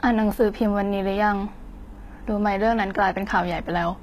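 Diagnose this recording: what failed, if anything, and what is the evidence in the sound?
Throughout the speech the treble sounds bright but synthetic, with plainly audible grit on sibilants and nothing above 14.9 kHz. At the codec stage, the likely cause is HE-AAC compression: spectral band replication rebuilds the treble from copied lower bands, which fits a bitrate around 20 kbps.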